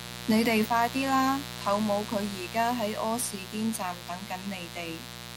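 From start to finish the speech sits on a raspy mains buzz built on 60 Hz, and it's loud, roughly 10 dB under the voice. Sharp switching spikes arriving twice per cycle spray harmonics up into the kilohertz range, hence that gritty edge rather than a clean hum.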